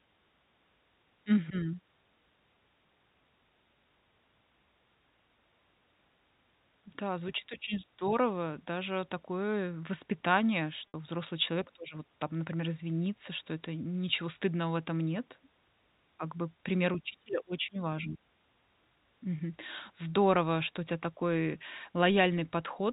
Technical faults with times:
10.88-10.94 packet loss with pitch repetition

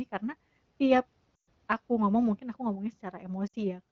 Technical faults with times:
1.35-1.49 lost AMR speech frames
3.47-3.55 lost AMR speech frames

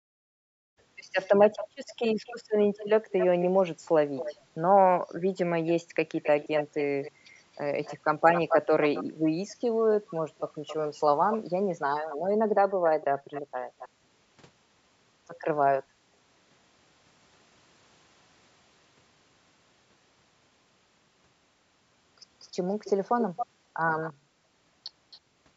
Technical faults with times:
0.64-4.42 echo leak
5.67-13.89 echo leak
13.94-14.06 background gated by the echo canceller
22.84-24.13 echo leak
25.11-25.19 echo leak

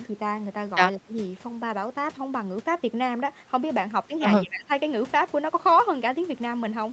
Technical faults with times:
0.96-1.18 speech suppressed in double talk
4.42-4.70 speech suppressed in double talk

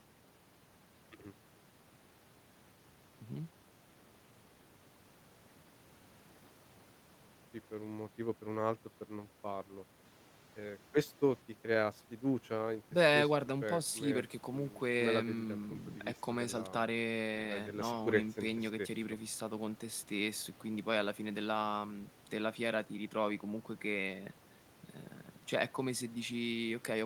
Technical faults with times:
none

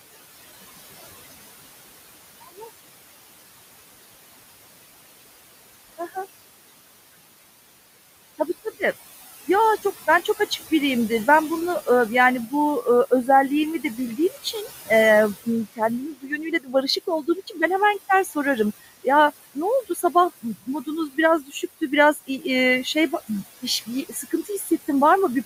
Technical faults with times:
0.00-25.45 noise suppressor artifacts
2.40-2.67 speech cut by the noise suppressor
5.98-6.17 speech cut by the noise suppressor
9.83-10.58 speech cut by the noise suppressor
13.83-14.90 speech cut by the noise suppressor
15.45-17.58 speech cut by the noise suppressor
18.25-24.71 speech cut by the noise suppressor

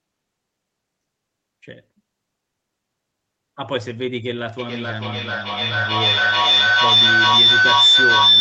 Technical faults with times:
4.59-8.40 feedback howl

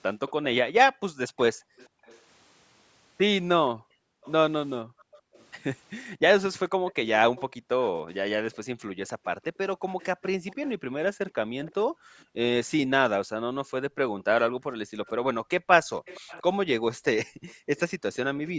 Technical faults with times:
0.28-18.16 echo leak
0.90-17.69 background gated by the echo canceller

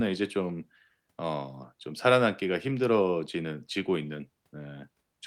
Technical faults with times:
none

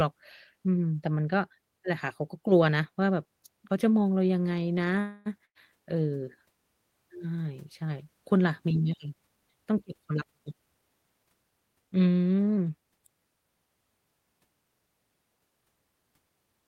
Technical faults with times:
4.99-5.40 call audio freeze
5.45-5.57 burst of packet loss
10.09-11.04 jitter buffer speed-up

